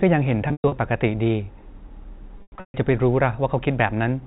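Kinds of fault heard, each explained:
Packet loss with pitch repetition: chunks of audio went missing and the decoder filled each hole by looping the last pitch cycle, letting it decay over roughly 50 ms. Here it strikes at 0.48 to 0.72 s and 2.38 to 2.74 s, with runs up to 120 and 140 ms, so the buzzy hold fades into brief silence. A spectrogram shows frozen, evenly spaced harmonics, then a blank gap. The waveform shows identical repeating cycles shrinking to flat.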